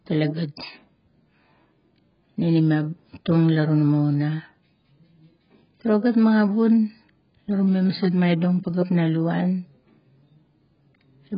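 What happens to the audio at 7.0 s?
AAC compression damage is present at 7.0 s, as it is throughout the clip. The speech is dull, with nothing above 5.2 kHz, and it has a smeared, warbling quality, with fizzy sibilants. The likely cause is AAC-LC encoding at a very low rate, consistent with about 12 kbps. At that rate the encoder cuts away the upper band and quantises the remaining frequency lines so coarsely that the spectrum turns patchy and unstable from frame to frame.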